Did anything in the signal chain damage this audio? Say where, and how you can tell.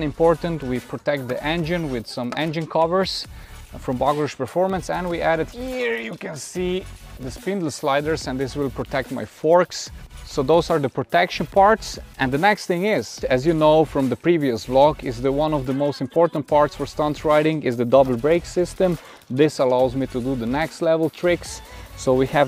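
No, there is no audible sign of damage from any stage of the signal chain in this audio.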